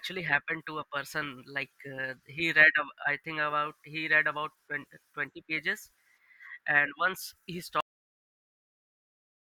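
A cut-off end hits this speech clip at 7.81 s: the sound stops mid-utterance and drops straight to digital silence, with no decay, for the remaining stretch to the end. The final buffers were never written or played out, so the recording simply ends early.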